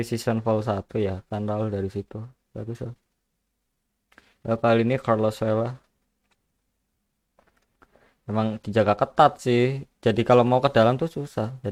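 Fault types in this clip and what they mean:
No technical fault can be heard anywhere in the signal.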